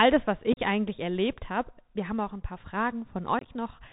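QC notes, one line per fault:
Throughout: Bluetooth CVSD headset codec. The speech is narrowband and dull, with nothing above 4 kHz, a granular hiss underneath, and scratchy, smeared s sounds. Louder high-frequency moments distort as the signal outruns the codec's adaptive step. The codec tracks the waveform one up-or-down bit per sample and can't follow fast, bright detail, which fits a 64 kbps CVSD link. The damage is plainly audible.
0.53–0.59 s and 3.39–3.49 s: unconcealed Bluetooth headset packet loss. The speech breaks into short, hard-edged holes that chop it, and the level dips briefly as it resumes. The first, between "das was" and "eigentlich erlebt habe", loses about 38 ms within 45 ms, the longest gap about 34 ms. The second loses about 53 ms scattered over 83 ms, longest gap about 23 ms. Lost headset packets were replaced with silence or an idle pattern rather than concealed.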